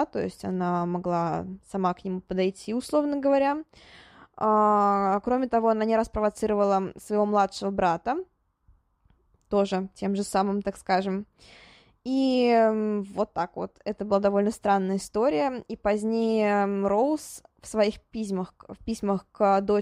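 From 15.84 s to the end of the clip, a 50 Hz buzz rides on the speech. This is a resampler restarted on every block. Each 20 ms block was converted on its own, likely from 44.1 kHz to 48 kHz, so the filter lacked real neighbouring samples at every block edge and left a small error there. Unlike mains hum at a similar pitch, this buzz drops out in the pauses and returns only when speech is present.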